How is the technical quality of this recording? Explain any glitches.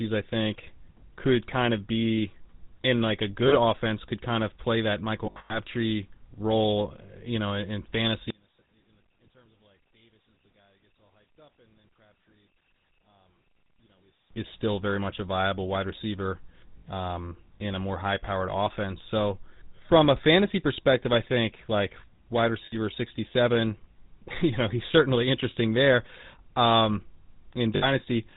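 The recording is heavily degraded: the whole clip carries plainly audible GSM full-rate codec damage, the speech is broken by several lost GSM frames, and for six seconds it almost disappears.

Throughout, the speech sounds buzzy and gravelly, with a dull top end because nothing above 4 kHz gets through. The codec models the vocal tract and excites it with a sparse, regularly spaced pulse train, which produces that rasp. The amount of roughness is consistent with the 13 kbps GSM full-rate codec used in early mobile telephony.

Brief metallic, ringing smears break up the speech at 3.48 to 3.55 s, at 16.78 to 16.82 s after "a viable wide receiver" and before "um in a more", at 22.66 to 22.76 s after "I think like wide" and before "sixty seven", and at 27.76 to 27.89 s. These are lost GSM frames. The decoder fills each gap by repeating the last good frame, so the sound freezes into a rough drone instead of going silent.

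The worst of the lost GSM frames cluster from 5.26 to 5.57 s, where the dropouts are scattered across about a quarter of a second. The longest unbroken loss lasts roughly a tenth of a second. Here the repeated frames ring, so the speech sounds garbled.

From 8.30 to 14.30 s, starting after "you know in in" and ending before "is still very much", the speech nearly vanishes. It drops by about 35 dB and leaves only a faint residue. The likely cause is one channel inverted. With one stereo channel's polarity reversed, the centred voice cancels almost completely when the channels are summed to mono, and only the small differences between them remain.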